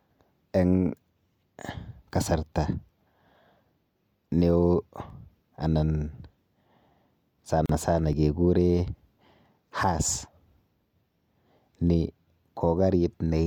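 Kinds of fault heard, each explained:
Audio missing between chunks: Tiny skips at 2.11, 5.10 and 8.13 s, three seconds apart, each losing just a few milliseconds with the sound butted straight together. That steady spacing likely means a chunked recorder or processor dropping a sliver at every handover.
Gap at a join of encoded pieces: At 7.66 s the sound stops dead for about 35 ms, then picks up exactly where it left off. That's the encoder's start-up delay and last-frame padding from separately encoded pieces left in at the join, edges smeared.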